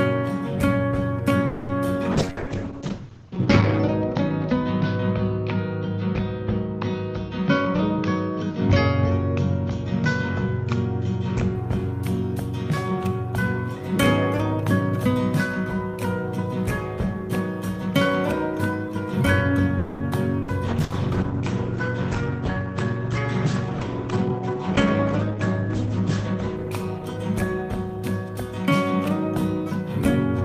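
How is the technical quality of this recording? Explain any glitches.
The recording has several typical internet-call glitches: two stalls, two long stretches of reduced quality, three short dropouts and three spells of sped-up playback.

At 1.46 to 1.72 s and again at 19.78 to 20.03 s the sound hangs for about 0.23 s and 0.22 s, the last instant drawn out into a fading buzz or hiss before carrying on where it left off. This is likely a call audio freeze: packets stalled in transit and the jitter buffer ran dry, so the receiver stretched what it had. Nothing is lost. A gap is inserted, which is what separates it from a loss burst.

From 2.13 to 11.61 s and from 20.67 to 27.86 s there is a call bitrate drop. The encoder was pushed from 48 kbps down to 8 kbps in the first stretch, bottoming out for about 1.7 s, and down to 12 kbps in the second, bottoming out for about 5.7 s. Audio bandwidth shrinks from 20 kHz to 8 kHz, so the sound turns muffled and rough, with a watery coarseness. 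Unlike the brief faults, this is a sustained change in timbre that only lifts when the bitrate recovers.

Bursts of packet loss occur at 2.41, 20.42 and 20.84 s. Each time about 60 ms of audio goes missing. The receiver bridges the hole by repeating the last sound and letting it decay into a short buzz or hiss, then jumps ahead. The freezes only pause the audio, but here the audio resumes further on, so a piece of the content is skipped rather than delayed.

A jitter buffer speed-up runs at 7.67 to 8.54 s at 110% speed, at 16.97 to 19.51 s at 103%, and at 24.54 to 30.43 s at 101%. Each time roughly 100 ms is trimmed away, somewhat less in the last stretch. With more audio buffered than needed, the receiver shed the excess by cutting tiny pitch-period slices many times over. The result is audio that runs faster while keeping its pitch, sounding hurried in the first stretch, which sets it apart from a simple faster playback that would raise the pitch.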